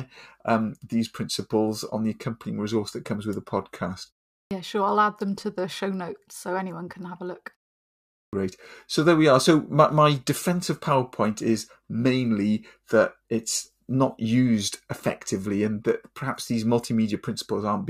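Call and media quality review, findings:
Clipped start after a pause at 4.45 s and 8.27 s. About 60 ms lost after pauses of 0.41 s and 0.79 s. First onset after "comes with the podcast" cut abruptly. Output device sleeping in silence, late wake.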